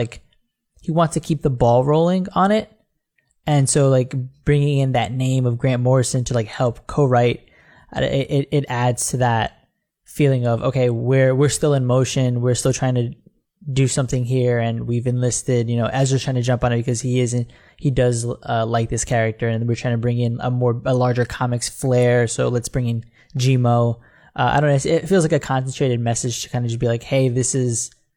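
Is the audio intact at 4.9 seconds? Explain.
Yes, the speech at 4.9 seconds is intact, with no dropout, glitch or other fault audible at that moment.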